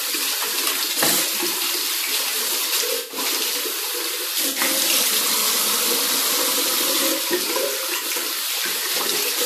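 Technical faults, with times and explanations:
0.87–0.98 s, 2.98–3.18 s, 4.49–4.60 s and 7.97–8.04 s, corrupt frame concealed: four concealed stretches, about 0.07 to 0.2 s long. Each fits a few damaged AAC frames that the decoder caught and papered over.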